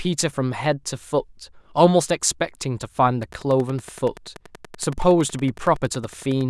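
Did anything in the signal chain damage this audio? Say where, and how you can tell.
Yes. From 3.23 s to 6.42 s a train of clicks runs over the speech, about 40 near-identical ticks at a regular 10.7 per second, peaking about level with the speech. On a waveform they show as evenly spaced spikes, and on a spectrogram as thin full-band vertical lines. The likely cause is electrical interference in the analogue wiring or a faulty connection or power supply.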